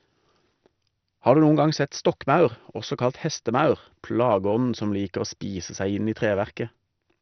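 MP2 compression, heavy, runs throughout the speech. Nothing reaches above 6.1 kHz, so the sound is dull, with a gurgling, granular roughness. That points to the likely cause, a low bitrate around 48 kbps: the codec switches off upper sub-bands and coarsely quantises those left.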